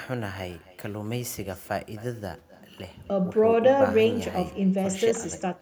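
From start to finish there's echo with no canceller: the far end is playing the call on a loudspeaker and its mic feeds it straight back, so every phrase returns roughly 300 ms later, about 19 dB down, as a thin shadow trailing the speech.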